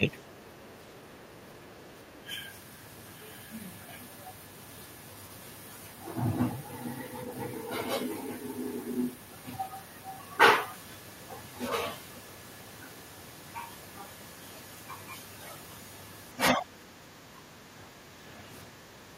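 From 0.00 to 0.07 s the speech dips by roughly 10 dB. This is speech suppressed in double talk, likely caused by the echo canceller ducking the talker while the far end was also active. From 0.60 to 0.73 s, and again from 1.85 to 2.18 s, the other side's voice leaks through. It is faint, some 25 to 30 dB below the speech, likely because echo from the loudspeaker was not fully cancelled. From 2.05 to 2.28 s the speech dips again by about 10 dB, overlapping that leak. From 16.51 to 18.20 s it sinks deeper, roughly 15 dB, for most of that stretch.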